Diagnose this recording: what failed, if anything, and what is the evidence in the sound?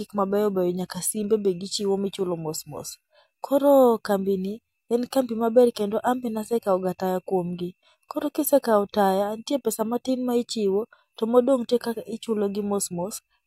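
Nothing failed; no stage of the recording left any audible evidence of a fault in the sound.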